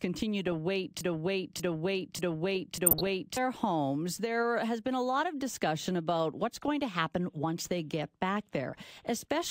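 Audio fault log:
1.01 to 3.37 s, broken-record loop: A 0.59 s fragment of speech plays four times back to back with identical timing. The stream likely stalled and kept resending its last buffered piece. The audio that should have filled this span is missing.
2.86 to 3.10 s and 6.61 to 6.68 s, DAB burbling: Short noise blips sit over the speech. The first burst falls inside the loop. The second comes between "of discussion about what's" and "to happen once they". Bit errors of a few per thousand got past error correction into the MP2 data, so wrong samples put short noise blips into single sub-bands. That fits about 11 frames hit in the first burst and 6 in the second.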